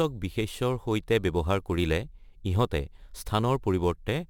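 Throughout the speech, crude rate conversion that repeats samples (consistent with 44.1 kHz to 48 kHz) adds a gritty, inharmonic fizz roughly 30 dB down, visible as stray spectrogram lines.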